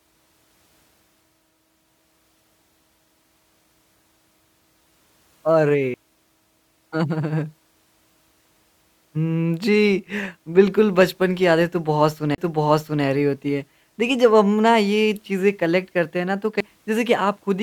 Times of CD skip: 5.94, 12.35-12.38, 16.60

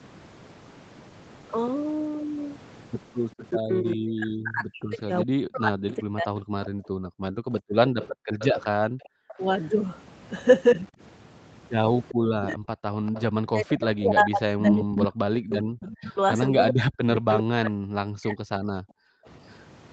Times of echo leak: 3.37-3.45, 6.65-19.59

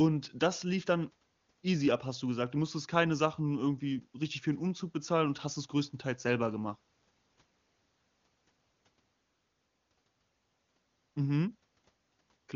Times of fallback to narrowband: none

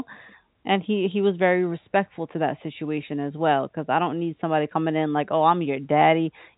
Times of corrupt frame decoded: none

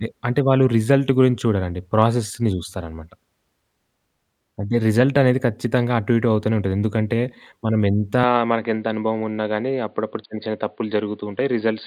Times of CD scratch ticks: none

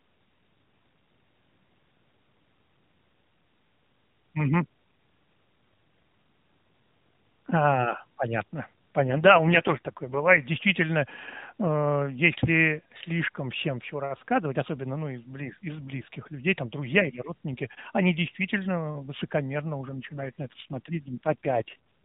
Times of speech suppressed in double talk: none

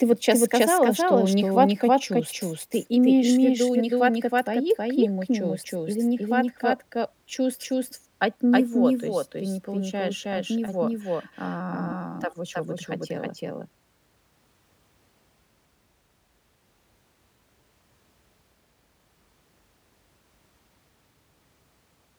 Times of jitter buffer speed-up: none

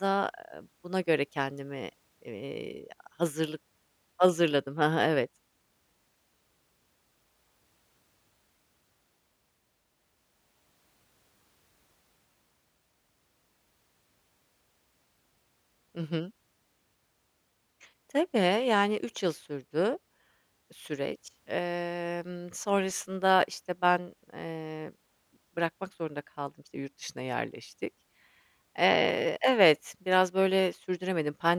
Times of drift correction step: 26.74-28.14

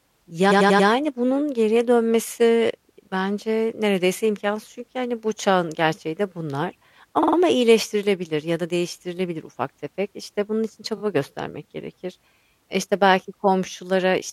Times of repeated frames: 0.50-0.87, 7.22-7.36, 10.97-11.01

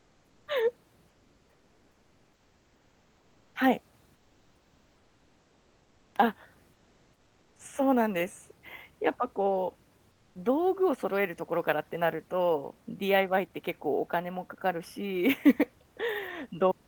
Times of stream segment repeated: none

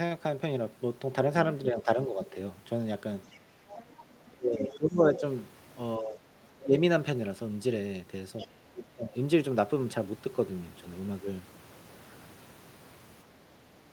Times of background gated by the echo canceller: 3.44-3.62

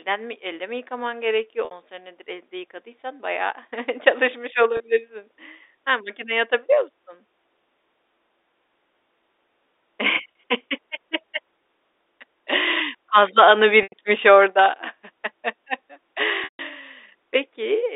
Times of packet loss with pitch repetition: 1.65-1.71, 4.77-4.80, 10.32-10.35, 13.83-13.92, 16.44-16.59

